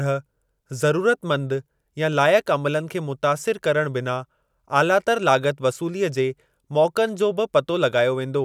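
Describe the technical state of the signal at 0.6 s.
At 0.6 s the signal is intact, with no audible fault at that point.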